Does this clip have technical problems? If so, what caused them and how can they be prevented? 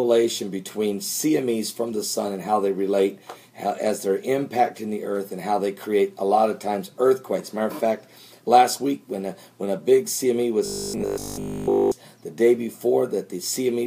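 Yes. From 10.66 to 11.92 s the sound turns into robotic sound from repeated short buffers: a rigid, metallic buzz at 50 Hz. That rate means a 20 ms block is being looped, likely because new audio arrived too seldom and the last block was replayed while the real audio was skipped, which happens throughout the span. A waveform shows identical 20 ms cycles; a spectrogram shows evenly spaced horizontal lines at multiples of 50 Hz. Larger buffers or a steadier audio thread would prevent it.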